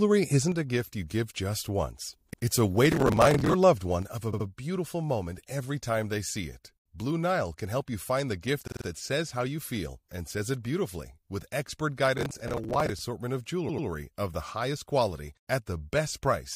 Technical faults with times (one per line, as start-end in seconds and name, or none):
0.52-2.13 one channel drops out
2.32-2.42 repeated frames
2.92-3.53 processor overload crackle
4.02-16.55 one channel drops out
4.32-4.46 repeated frames
8.66-8.85 repeated frames
12.18-13.01 processor overload crackle
13.68-13.86 repeated frames